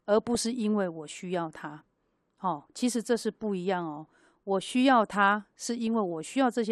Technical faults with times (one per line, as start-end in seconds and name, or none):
0.00-6.71 MP2 compression
0.35-0.40 DAB burbling
4.01-4.13 DAB burbling
5.87 DAB burbling